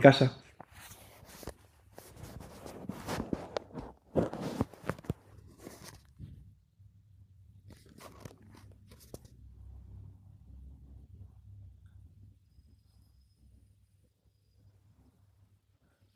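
Nothing technically wrong can be heard in this speech recording, and the signal stays intact throughout with no faults to report.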